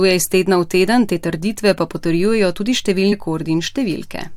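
Compressed frames were skipped at 3.11 s, just after "trditve pa potrjujejo tudi": the decoder never played a run of whole frames, either because they were missing or because it rejected them as damaged. The speech jumps forward by roughly 150 ms, which points to about seven frames of 23.2 ms each being lost. At the splice the following speech arrives abruptly early.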